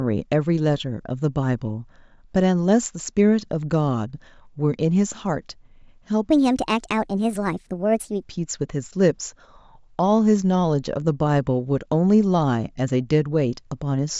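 From 6.31 to 8.23 s the speech suddenly turns high and hurried, running 1.38 times faster and sitting about 5.5 semitones sharp, then drops back to its natural pace and pitch. This is a wrong sample rate fault: the samples in that stretch were played back faster than they were captured, without conversion, so speed and pitch rose together by the same ratio. That ratio fits 16 kHz audio being clocked out at 22 kHz.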